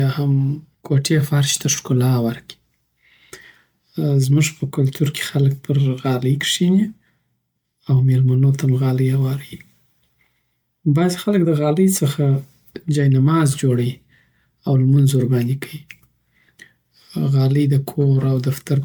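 Speech clip with generation loss throughout: swirly, hollow and smeared, attacks blurred, likely from around seven MP3 passes at roughly 130 kbit/s, with nothing above 20 kHz.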